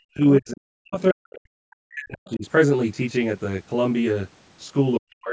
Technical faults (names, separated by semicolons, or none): channel delay (comb filtering); speech suppressed in double talk; other side's voice leaking through